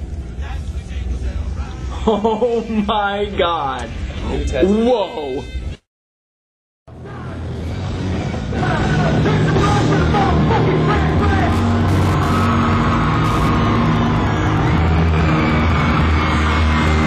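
From 10.93 s to the end, a steady ticking about ten times a second, some 25 dB below the sound: Wi-Fi interference, a nearby radio's 102.4 ms beacon rectified by the audio circuit.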